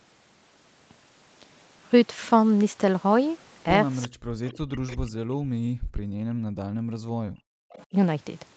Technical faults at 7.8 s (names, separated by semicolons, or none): speech suppressed in double talk; echo leak